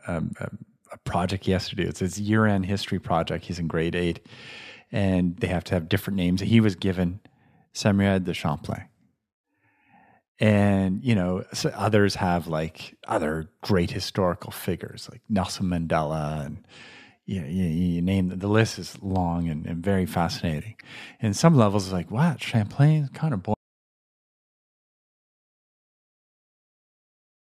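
The speech cuts out abruptly at 23.54 s and never returns: the final stretch to 27.40 s is dead silence with no room tone. This is an audio dropout to silence, likely from the input being lost while recording continued writing zeros.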